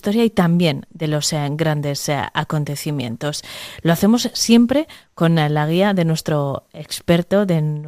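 A short speech clip with one burst of DAB burbling, from 6.18 to 6.23 s, just after "con la guía de". For about 50 ms the speech is broken by burbling. Weak reception let bit errors slip past the error correction into the MP2 audio data. Corrupted samples put short blips of noise in single sub-bands. The burst hits 11 frames, with a bit error rate of a few tenths of a percent.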